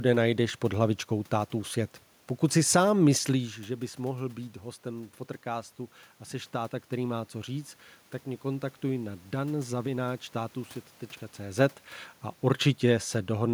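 Speech recording with no technical faults; the room noise belongs to the recording environment, and the level shifts near 3 s and again near 11 s come from the talker moving relative to the microphone, not from the system.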